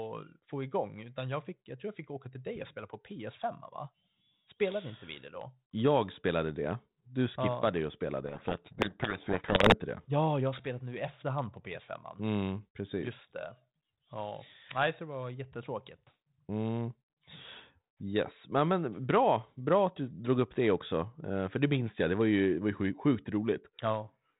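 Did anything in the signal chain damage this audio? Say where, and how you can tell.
Yes, at the codec stage. From 8.26 to 9.77 s the speech is buried in harsh distortion, a codec payload misread. The decoder took G.726 code words with their bits in the wrong order, so every valid-looking sample came out wrong. Surrounding 32 kbit/s G.726 sounds intact.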